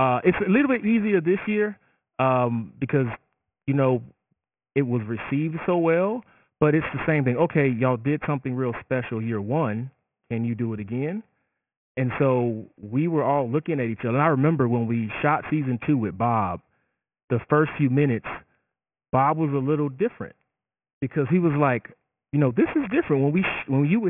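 It's a speech clip with aliasing all the way through. Everything above about 3 kHz has folded back down as gritty, metallic junk sitting roughly 15 dB under the voice, which fits a drop to a 6 kHz rate without an anti-alias filter first.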